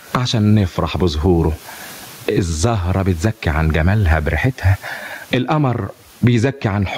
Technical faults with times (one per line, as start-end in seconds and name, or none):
0.00-6.98 gain pumping